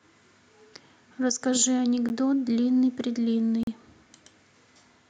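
At 2.09 s and again from 3.63 to 3.67 s the speech drops into a block of digital silence, where samples went to zero. The 13 ms gap is a tick and the 40 ms gap a short hole. Unlike a faded dropout, both edges cut out and back in abruptly.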